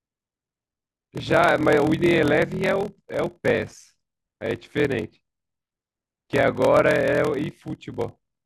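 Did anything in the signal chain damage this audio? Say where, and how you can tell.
Yes, at the driver or buffer stage there's a block size mismatch (padded), and it runs through the whole clip. A steady buzz at about 41.7 Hz sits under the speech from start to finish, and everything plays at 0.889 times normal speed while the timbre stays the same. One stage is handing over shorter blocks than the next one reads, which fits 1024-sample writes, so each read ends in a run of zeros. That gap repeats at the block rate, which gives the buzz and the slowdown.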